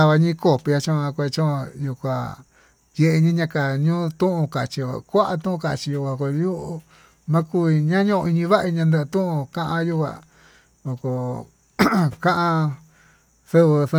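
Nothing stood out as a technical problem on listening to the speech in this recording.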